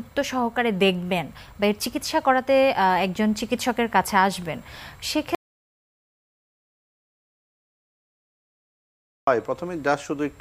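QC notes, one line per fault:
5.35 to 9.27 s, audio dropout to silence: the sound cuts off mid-flow and about 3.9 s of dead silence follows, with no room tone at all, before it snaps back in. Most likely the input was lost while recording kept running, so that stretch is simply gone.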